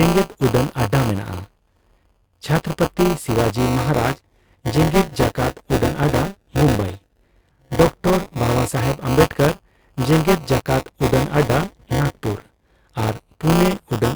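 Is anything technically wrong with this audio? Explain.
Yes. Throughout the speech there is a robotic, rattling buzz at 200 Hz that sits on the voice and drops away whenever there is no signal. This is buffer tearing. The program filling the ring buffer and the hardware reading it have drifted out of step, so they cross inside every period of about 5 ms. Roughly a sixth of each period replays audio from around 20 ms earlier, with hard joins on both sides.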